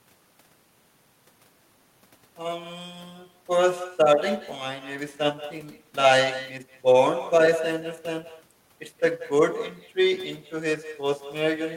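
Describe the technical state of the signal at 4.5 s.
At 4.5 s, as throughout, there's echo with no canceller: the far end's loudspeaker feeds the microphone, returning a thinner copy about 13 dB down roughly a fifth of a second later, distinct from smeared room reverb.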